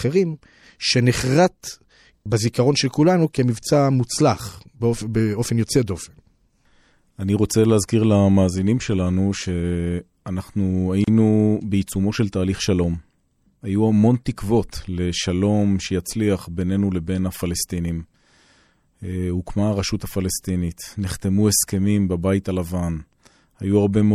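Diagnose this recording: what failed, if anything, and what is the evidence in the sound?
The codec stage shows plainly audible damage throughout this speech: a watery swirl on s sounds, and smeared attacks, which fits a low MP3 bitrate near 64 kbps. The likely cause is MP3 compression, which starved weak frequency lines of bits. Unlike a simple low-pass filter, the lost detail flickers frame to frame.

At 11.04 to 11.08 s a silence of about 34 ms opens in the middle of continuous sound, with softened edges, and the speech resumes exactly where it stopped. This is a gap at a join of encoded pieces: separately encoded segments were joined with encoder start delay and final-frame padding left in place. A network dropout would lose audio rather than pause it.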